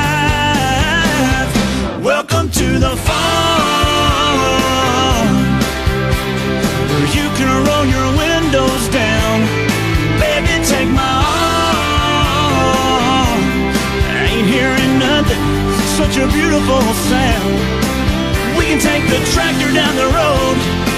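No technical faults are audible.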